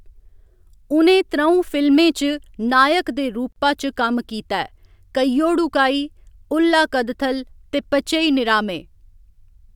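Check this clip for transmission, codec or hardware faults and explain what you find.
One fault is present: a gap at a join of encoded pieces, from 3.52 to 3.56 s, just after "च नायक दे". The speech was encoded in separate pieces of about 6 s and joined untrimmed. The encoder's start-up delay and last-frame padding both remain, opening a 37 ms silence with smeared edges before the speech resumes where it stopped.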